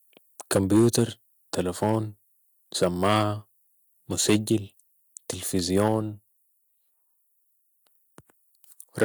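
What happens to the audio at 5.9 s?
Right around there, from 5.77 to 5.95 s, the peaks sound flattened and crackly, which is likely microphone overload: input pushed about 6 dB past the converter's ceiling, chopping a small share of the waveform tops. Then at 5.88 s the level abruptly drops by about 4 dB, voice and background together, likely the microphone volume stepped down by the call software reacting to that clipping.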